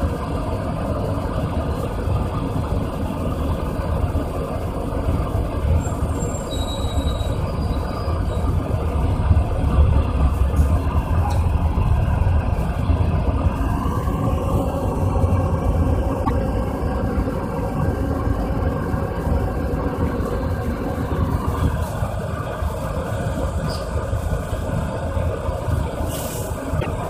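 At 16.21 s and again at 26.76 s, damaged data in the compressed stream makes the decoder misread frames and lose sync, giving a brief fault of about 0.09 s each time.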